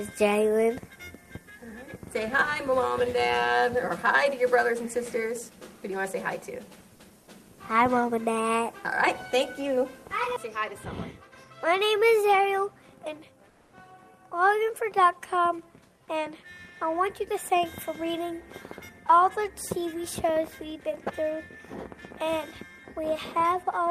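From 13.51 to 13.71 s, a 200 ms stretch of background gives way to comfort noise: a flat, featureless hiss about 4 dB quieter than the surrounding floor, which sits about 37 dB below the loud parts. This likely comes from Opus DTX pausing transmission during silence.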